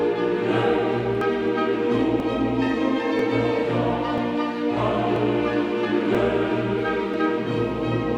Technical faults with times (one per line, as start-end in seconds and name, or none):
1.21 overlap between stream segments
2.20 overlap between stream segments
3.19 overlap between stream segments
4.18 overlap between stream segments
5.16 overlap between stream segments
6.15 overlap between stream segments
7.14 overlap between stream segments